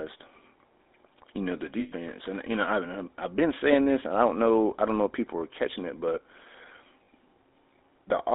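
Throughout, the GSM full-rate codec gives a buzzy, gravelly roughness within a 250 Hz to 3.7 kHz band. Pulse-driven excitation causes this grit, which plain band-limiting alone would not produce.

Lost GSM frames occur right after "you know the" at 1.80 to 1.93 s, and again at 7.04 to 7.08 s. The last good frame is repeated, giving a metallic ring rather than the abrupt silence of a dropout.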